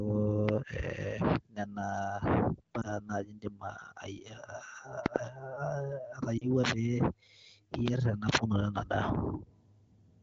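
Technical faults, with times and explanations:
0.49 to 0.51 s, 5.06 to 5.18 s, 6.72 to 6.74 s and 7.74 to 7.90 s, loud pop: sharp pops, single at 0.49 and 6.72 s and doubled at 5.06 and 7.74 s, jump roughly 15 to 25 dB above the speech, which continues underneath. They most likely come from a voltage step, such as a switch, plug or static discharge.
2.82 to 2.93 s and 6.37 to 6.51 s, lost AMR speech frames: the first sounds like one missing 20 ms frame and the second like about 40 ms, as two consecutive frames. The AMR-WB decoder fills each gap by repeating its last good parameters at falling gain. This gives a brief warbling dip, deeper at 6.37 s, before the speech returns weak or rough for a moment.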